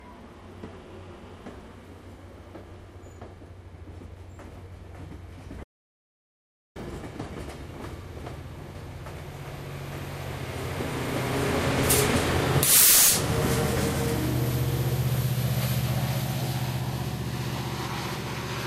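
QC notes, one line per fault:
5.64–6.76 s, audio dropout to silence: the sound cuts off abruptly at 5.64 s and drops into dead digital silence for about 1.1 s, then snaps straight back in mid-flow at 6.76 s. There's no room tone or noise floor in the gap at all, which is why it sounds like a hole rather than a quiet patch. The likely cause is the input going missing for a moment, say a loose connection or a brief mute, while the recorder kept writing. Whatever happened in that second is simply gone.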